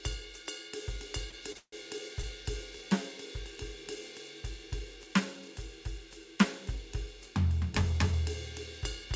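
A music clip carried over a call path, with nothing above 8 kHz, which fits a G.722 wideband codec. Two short stalls from late packets occur, at 1.30 to 1.34 s and 1.52 to 1.57 s. Each time a packet arrived late and the jitter buffer ran dry. The receiver held the last sound for about 24 ms, then 29 ms. Nothing is lost, but the music hangs briefly with a slight buzz. Right after, from 1.57 to 1.74 s, a call audio freeze follows. The sound is stretched into a fading buzz, then about 60 ms of silence. About 151 ms is added in total. The music then resumes where it stopped, with nothing missing. The likely cause is packets held up in transit, emptying the jitter buffer for longer.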